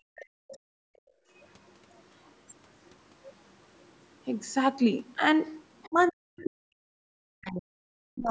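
A speech recording from a call, with audio band-limited to about 8 kHz by the call's microphone processing, shows three echo-canceller faults. From 0.0 to 1.3 s the background is gated by the echo canceller: the room tone dips by as much as about 35 dB for roughly a second in total while the loudspeaker plays, then comes back. The talker's own voice is not chopped here. What vanishes is the ambient bed between sounds, which separates this gating from double-talk suppression.

The other side's voice leaks through in scraps at 0.16 to 0.58 s, 1.35 to 1.74 s, 2.24 to 2.32 s, 2.88 to 2.93 s, 5.79 to 6.11 s and 6.44 to 6.50 s. It likely comes from incomplete echo cancellation of the far-end loudspeaker. Most of these sit very low, around 35 to 40 dB under the talker. The first is stronger, near 25 dB down, and the one at 6.44 s is only about 10 dB down. It is a second voice added on top, not a loss of sound.

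From 5.87 s to the end, the talker's speech is suppressed in double talk. It likely happened because both sides spoke together and the canceller turned everything down. The voice dips by up to roughly 40 dB in pieces over about two seconds. Unlike the early gating, it is the talker's speech itself that breaks up, and it overlaps the leaked far-end voice.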